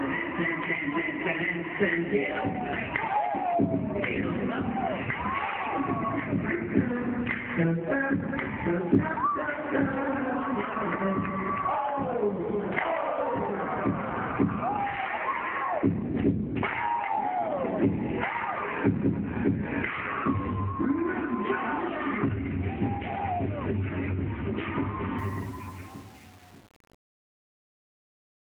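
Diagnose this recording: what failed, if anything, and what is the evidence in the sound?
Truncation distortion on the fade runs from 25.19 s to the end at 28.43 s, in the sample-format conversion stage. As the fade-out, starting around 25 s, sinks toward the smallest step, the tail turns gritty. Without dither, coarse square stepping fits a 7-bit word length.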